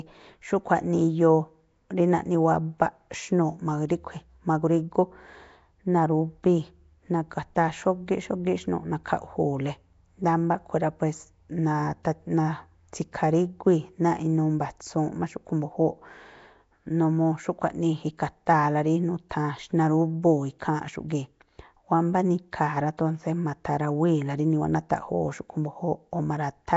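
From start to finish the speech was likely squeezed through Nellymoser compression, the old Flash microphone codec, at a density that fits roughly 32 kbps. The coder spends a fixed, small budget on each short block, so faint frequency bands lose their bits and get noise filled in. The damage is plainly audible: a rough, hissy halo around the speech, a smeared underwater quality, and nothing at all above 7.7 kHz.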